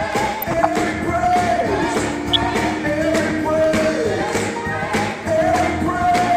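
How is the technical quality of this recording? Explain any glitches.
Two short bursts of DAB burbling break into the sound, from 0.41 to 0.66 s and from 2.33 to 2.53 s. Reception weak enough for a bit error rate of a fraction of a percent lets corrupted bits past the error correction into the MP2 stream. Damaged samples put short blips of noise into single sub-bands, and damaged scale factors make sub-bands jump in level for up to a frame, across what sounds like around ten frames per burst. The result is burbling over the programme.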